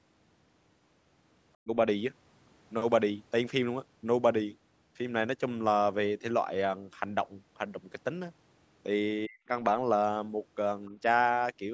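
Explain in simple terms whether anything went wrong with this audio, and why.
Speech suppressed in double talk, at 1.62 to 1.71 s and 9.27 to 9.49 s: the speech briefly drops away almost to nothing. The likely cause is the call's echo canceller mistaking both sides talking at once for echo and turning everything down.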